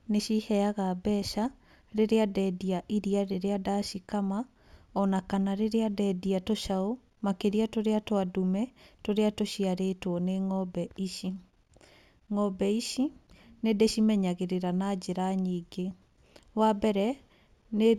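Imaging from linear upsampling runs through the whole speech clip. The audio appears to have been raised from a 16 kHz rate to 44.1 kHz by joining samples with straight lines. That is a poor filter. The top of the original band sounds dulled. A mirrored copy of the spectrum sits between 8 and 16 kHz, roughly 30 dB below the signal. It adds a faint metallic shimmer to sibilants.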